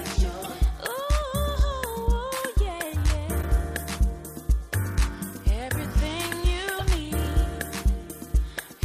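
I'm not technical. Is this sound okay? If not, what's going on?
No. There are three short glitches, at 0.43 to 0.46 s, 3.38 to 3.44 s and 6.78 to 6.81 s, each heard as a brief chirp or blip. This is damaged data in a compressed stream: a few pieces of the stored file are wrong, so the player can't read that stretch properly. It briefly loses its place, produces garbled sound, then finds the next readable point and carries on.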